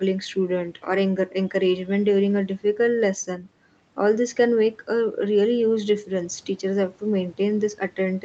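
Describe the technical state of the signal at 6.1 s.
At 6.1 s the speech is intact, with no dropout, glitch or distortion, only the normal call-path band limit that leaves nothing above about 8 kHz.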